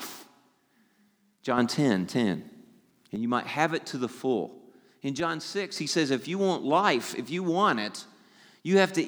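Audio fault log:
1.58–3.16 s, sudden gain jump: speech and background noise rise together by about 6 dB, then fall back abruptly, likely from a digital gain change applied without a ramp.
5.20–5.76 s, sudden gain jump: level and noise floor drop by about 7 dB and recover just before "he says", likely an unramped gain step.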